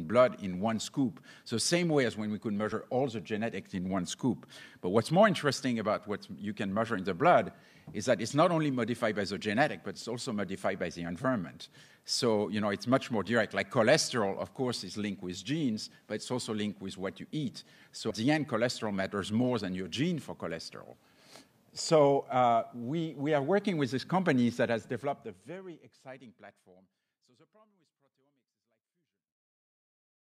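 The audio twice lurches forward with a short blip: a small hop at 2.71 s, and a larger jump at 18.09 s. These are compressed frames skipped. Whole coded frames were lost from the file or thrown out by the decoder as damaged, so playback resumes later. The frame length is 26.1 ms, so the first gap is about one frame (around 30 ms) and the second about five (around 150 ms). The fade-out starting near 24.5 s is smooth.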